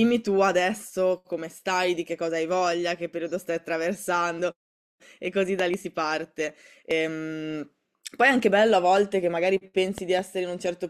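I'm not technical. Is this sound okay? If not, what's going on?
No. Two loud pops stand out, each a pair of sharp pops close together, at 5.59 to 5.76 s and at 9.98 to 10.21 s. The first is clearly louder than the speech. The speech carries on underneath. The likely cause is a sudden electrical jolt, such as a plug, a switch or static.

At 6.91 s there is a brief chirp or blip. This is damaged data in a compressed stream. A small piece of the recording file was corrupted. The player stumbled and searched for the next point where it could read again.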